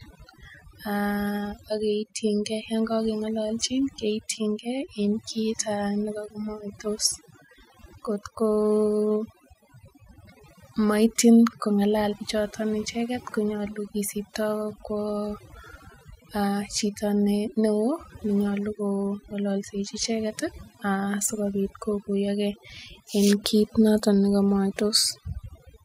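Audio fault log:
Throughout: overdone noise removal. A noise reduction process has been pushed far too hard on this speech. Frequency bands that sit close to the tool's noise estimate are cut deep or switched off. The softer parts of the speech fall into that range and vanish along with the noise. Between phrases the background drops and breaks up, dotted with twinkling specks.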